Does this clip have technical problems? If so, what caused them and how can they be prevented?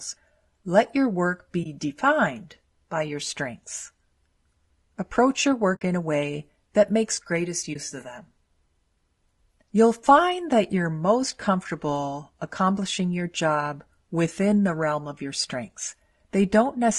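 Yes. Throughout the speech there is plainly audible codec damage: a rough, grainy texture with noise between the harmonics and a thinned, artificial-sounding top band. The likely cause is low-delay AAC compression (AAC-ELD) at roughly 32 kbps, where short transform frames resolve pitch harmonics poorly and spend bits inefficiently. Prevent it by raising the bitrate or using a standard-delay codec where latency allows.

There is also AAC frame loss with muting: the sound fades into short, soft-edged holes at 1.63–1.66 s (after "your work", before "defined by your strengths"), 5.75–5.82 s (before "in a way that") and 7.73–7.76 s (after "way that makes greatest", before "of them"). The gap lengths fit one, three and one lost frames. The decoder zeroed each missing frame's spectrum, and the overlapping windows tapered the edges. Prevent it with network redundancy or FEC, plus a decoder that conceals losses instead of muting them.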